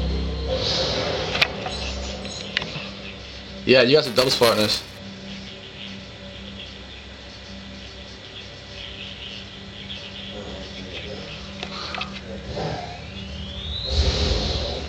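The audio has buffer tearing from 4.05 to 4.98 s. It is heard as a robotic buzz at 345 Hz, which fits a 128-sample buffer. The program filling the ring buffer and the hardware reading it have drifted out of step. Their positions cross inside each period. So a small slice of every buffer holds audio a few milliseconds old. Hard joins on both sides of that slice repeat at the buffer rate and create the buzz.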